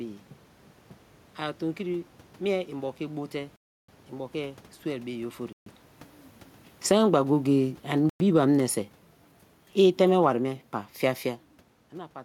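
It's a speech clip with three dropouts to dead silence: 3.56 to 3.89 s (about 0.32 s), 5.53 to 5.66 s (0.14 s) and 8.10 to 8.20 s (0.11 s). Each time the audio just resumes afterwards. That pattern is likely a Bluetooth stall, where the headphone buffer ran dry while held-up packets were resent. The one near 5.5 s lands right where the talker also shifts at the mic, so the level changes there too. From 6.76 to 8.79 s there's automatic gain falling, with the gain control easing everything down by about 5 dB, voice and room noise alike. That gets tangled up with automatic gain rising from 7.07 to 7.53 s, a brief swell of about 3 dB, so the level dips, lifts, then keeps sinking, with the third stall dropped into the middle of it.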